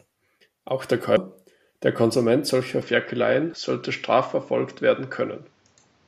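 At 1.17 s there is a brief blip, a sign of damaged data in a compressed stream. A few bytes of the coded speech are corrupt, so the decoder misreads the frame there, loses its place and resynchronises on the next frame header. The result is a very short glitch. This sets it apart from a device change, which alters the tone for a sustained stretch rather than for an instant.

From 2.82 s to the end the speech turns duller and boxy, with nothing above 7.6 kHz. A quiet new background noise, roughly 40 dB below the speech, comes in as well. The likely cause is the input switched to a poorer device with a narrower band. The change happens without a gap and with no real shift in level, so the cues are the altered tone and the new noise. A codec glitch would not persist like this.

At 3.54 s a second short blip of the same corrupt-stream kind interrupts the narrowed sound.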